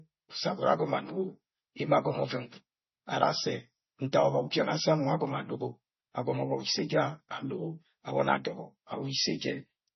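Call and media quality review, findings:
MP3 compression, throughout. Speech band-limited, nothing above 5.9 kHz; s sounds dull, with watery swirl and metallic chirps on sibilants, smeared onsets. Likely cause: starved MP3 encode, heavy damage fitting roughly 24 kbps; encoder cuts treble and zeroes weak frequency lines, which flicker frame to frame.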